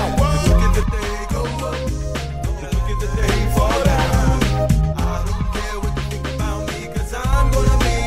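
From 0.83 to 3.23 s and again from 4.93 to 7.33 s, the level falls abruptly by about 6 dB with unchanged tone, likely one channel dropping out. Unlike a fade, the step is instant.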